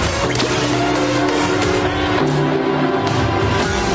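No technical faults can be heard anywhere in the audio. The call microphone processing is working as expected: the lowest bass is trimmed by its high-pass filter, and nothing reaches above 8 kHz.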